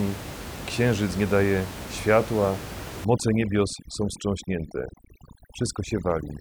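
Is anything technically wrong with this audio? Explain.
Yes. From 3.05 s, just after "księżyc nie daje światła", to the end, the background drops and breaks up into twinkling specks. This is overdone noise removal: bands near the noise estimate are cut too hard, taking quiet speech detail with them. Before that point, room noise sits about 12 dB below the speech.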